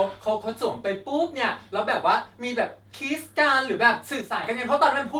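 From 4.21 to 4.44 s the speech abruptly dips by about 6 dB for just under a quarter of a second, then snaps back. That's the mark of one channel dropping out, likely a stereo channel lost before the mono sum, leaving only half the shared signal.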